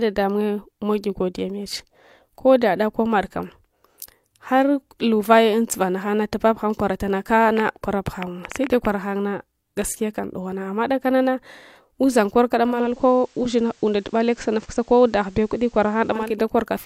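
A train of clicks runs through this speech recording from 7.57 to 8.86 s: about ten similar pops at roughly 7 per second, irregularly spaced and standing out sharply above the voice. This is likely interference from nearby equipment or a faulty connection or power supply injecting repeated pulses. Digital radio blending to analogue follows at 12.66 to 16.39 s. The receiver cross-fades over about 332 ms to the FM broadcast. Hiss about 35 dB below the signal then comes up while the level stays unchanged.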